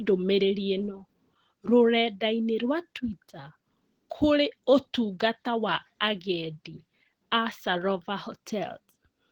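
Opus voice compression runs throughout the speech. It sounds like hybrid mode, with SILK below 8 kHz and CELT above. Content still reaches about 20.3 kHz. The excitation is coded coarsely, which fits a rate near 16 kbps. Speech comes out plainly hoarse and slightly robotic.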